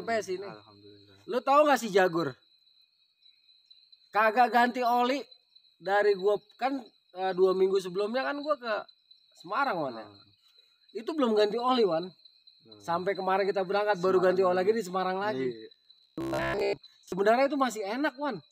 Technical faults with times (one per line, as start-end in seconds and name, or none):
15.74-17.12 robotic sound from repeated short buffers